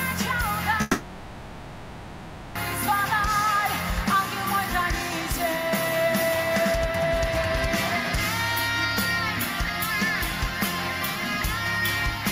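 From 0.81 s to 2.57 s the sound dissolves into a fading buzz, then returns with a gap, likely a long network dropout of about 1.74 s.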